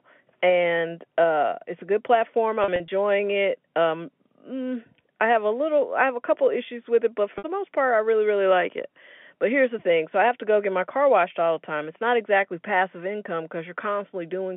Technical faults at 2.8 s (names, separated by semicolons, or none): packet loss with pitch repetition